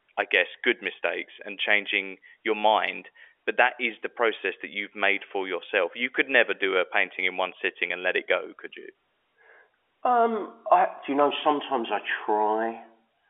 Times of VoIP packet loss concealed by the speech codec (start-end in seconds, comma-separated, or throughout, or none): none